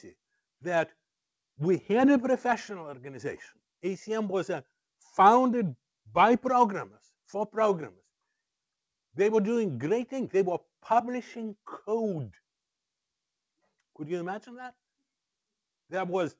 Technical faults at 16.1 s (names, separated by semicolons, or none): none